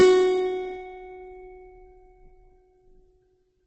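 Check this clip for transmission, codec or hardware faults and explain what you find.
Yes, a couple of things stand out, and both run through the whole music clip.

First, there's a doubled audio track. A second full-band copy trails the original by around 0.7 s at roughly the same loudness, so every attack gets an echo with no decay or room colour behind it. That points to the likely cause: the signal being picked up twice, once through a slower path, or an edit that stacked two copies out of sync. It sounds like a stuttering, smeared double rather than reverb.

Second, there's heavy Opus compression in its music (CELT) mode. Nothing comes through above 8.5 kHz, so the top end is cut off. The tones have gone grainy, rough and noisy instead of swirly. The likely cause is the encoder running short of bits, which fits a very low rate around 12 kbps, and filling starved bands by folding in lower ones or with noise. 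That keeps the energy but wrecks the texture.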